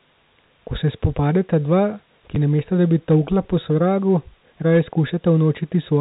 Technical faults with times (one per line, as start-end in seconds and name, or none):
1.05-1.82 hard clipping
2.35 packet loss with last packet repeated
4.58 packet loss with last packet repeated
4.70-4.78 hard clipping